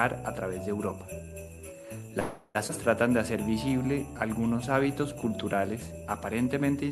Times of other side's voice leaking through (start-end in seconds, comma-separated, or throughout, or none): none